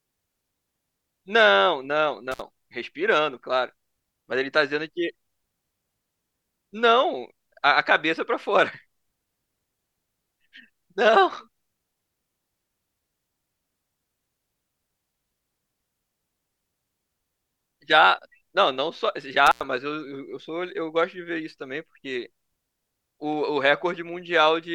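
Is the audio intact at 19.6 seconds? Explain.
No. An intermittent contact runs from 19.46 to 19.64 s: a loose connection opens for about 93 ms, cutting the speech to faint hiss, with crackle showing as broadband spikes at both edges.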